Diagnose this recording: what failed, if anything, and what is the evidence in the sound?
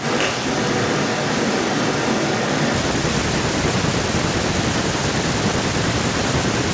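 Call processing is where this goes wrong: it's echo with no canceller, running the whole clip. Every phrase comes back about 18 dB down, thinner, roughly 0.4 s later. The far end's loudspeaker feeds its microphone and nothing strips it out before the return trip.

The first 2.72 s, already under way at the start, sound roomy and hollow, a few dB quieter, bass-light, with more room noise, and then the sound snaps back close. That's most likely a switch to a distant microphone, with the close mic's feed dropping out at the analogue or capture stage. All of it sits inside the G.722 call band, with nothing above 8 kHz.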